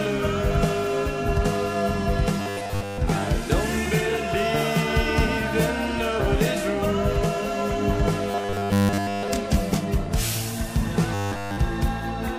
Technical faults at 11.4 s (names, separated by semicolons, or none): robotic sound from repeated short buffers